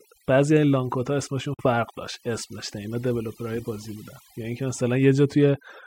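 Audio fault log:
throughout, overdone noise removal: the background is pressed to near silence, broken only by small twinkling specks. An overly aggressive noise reduction stage treated every frequency band sitting near its noise estimate as noise and cut it deep or removed it outright. The quieter parts of the speech fell under that threshold too, so they were stripped along with the noise.
1.54 to 1.67 s, Bluetooth dropout: the speech stops dead for about 0.13 s, then picks up again further along, as though it had kept playing through the silence. This is likely a wireless link to headphones losing audio packets that arrived too late to play. The output stayed silent until fresh packets came in, and the length of the hole fits a few consecutive packets going missing.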